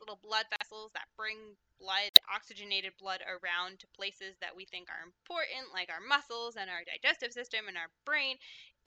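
At 0.56 s and again at 2.09 s the sound cuts to abrupt silence for about 68 ms and 83 ms. These are corrupt frames muted: the decoder rejected damaged compressed frames and filled them with silence. The hole lengths fit two and three frames, and timing holds afterwards, unlike a buffer dropout.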